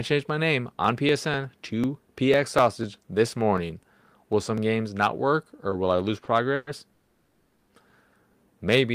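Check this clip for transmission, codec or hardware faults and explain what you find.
Three kinds of fault show up in this speech, all of them timing problems rather than anything tonal.

Periodic USB or driver dropouts run from 0.85 to 4.58 s. About fifteen ticks come every 0.25 s, where around a millisecond is skipped each time the driver gets blocked.

Two short stalls from a late packet hit at 5.70 and 6.25 s. Each time the jitter buffer ran dry and the sound was held for 20 ms, giving a slight buzz or dip.

Two call audio freezes follow, at 6.55 to 6.69 s and 6.93 to 7.72 s. The sound hangs as a fading buzz or hiss for 120 ms and then 770 ms, likely from packets delayed in transit, before picking up where it stopped.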